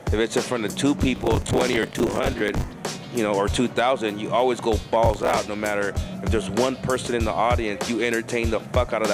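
Two bursts of processor overload crackle tear through the audio, from 1.16 to 2.72 s and again from 5.06 to 5.39 s. Each time, the processor falls behind and keeps missing its buffer deadlines, so scraps of old audio get replayed with hard edges. The tearing grain suggests roughly 10 ms buffers, with dozens of misses in the first burst and a dozen or so in the second, and it stops as soon as the load eases.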